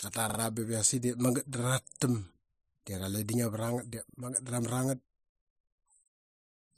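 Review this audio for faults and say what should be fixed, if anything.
Repeated buffer stutters occur at 0.30–0.38 s and 1.88–2.01 s. A 43 ms slice, which fits a 2048-sample buffer, plays two then three extra times with hard joins. Fresh audio arrived late, so the device replayed its last buffer. More output buffering or higher playback-thread priority would prevent this.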